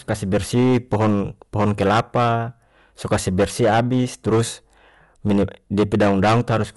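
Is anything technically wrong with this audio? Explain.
Yes, two faults run through the whole speech clip.

Hard clipping is present from start to finish. The signal is driven about 14 dB past what the stage can pass, so peaks are sliced flat, with several percent of samples pinned at the limit. The flattened tops add high harmonics, giving a harsh, gritty fuzz on every loud syllable.

The codec damage is plainly audible throughout and sounds like Dolby Digital compression, likely at a low bitrate. Nothing is present above 11.4 kHz, which fits an encoder narrowing the band at around 64 kbps. Starved frequency lines get filled with noise, making the sound dull, with a rough, fluttering haze around tonal parts.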